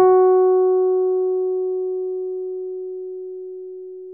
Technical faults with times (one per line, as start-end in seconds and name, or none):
none